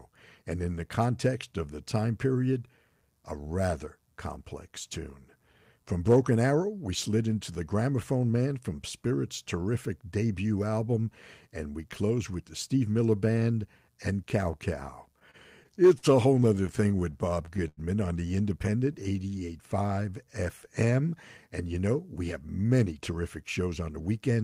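Repeated stalls (stutter) occur from 15.19 to 16.05 s, just before "a whole", and again from 16.43 to 17.79 s, ending before "on the". Late packets repeatedly drained the jitter buffer, and the receiver extended the last sound through 5 and then 12 short gaps, the longest 93 ms, so the audio drags and stutters without losing anything.

A jitter buffer slow-down follows from 18.70 to 20.26 s, after "on the". Repeated pitch periods add 147 ms, so the audio plays at 91% speed with unchanged pitch and drawn-out sounds.

A jitter buffer speed-up runs from 22.64 to 24.38 s. The receiver trimmed about a fifth of a second of pitch periods to reduce the delay, so the audio plays at 111% speed, hurried but at the same pitch.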